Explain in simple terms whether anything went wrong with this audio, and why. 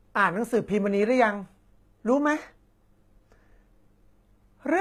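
HE-AAC compression runs throughout the speech: s sounds come out gritty and metallic, and the treble sounds bright but artificial. The likely cause is the codec keeping only the lower frequencies and faking the highs by copying lower bands upward, so they don't match.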